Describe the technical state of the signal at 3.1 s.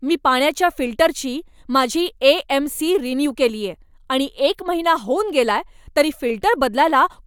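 At 3.1 s the signal is intact, with no audible fault at that moment.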